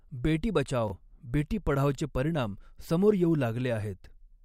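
At 0.88 to 0.92 s, chunks out of order: one 20 ms chunk of the speech was delivered a chunk late, so it plays after the chunk that should follow it. Nothing is missing, but the swapped pair creates three hard joins, heard as a brief jumbled stutter.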